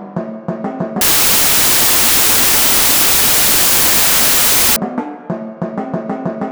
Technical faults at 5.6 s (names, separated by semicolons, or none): none